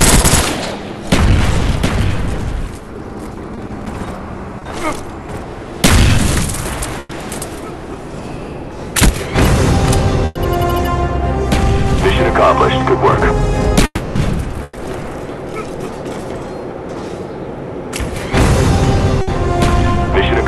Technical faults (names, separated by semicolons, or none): short concealed packet loss; burst of packet loss; long network dropout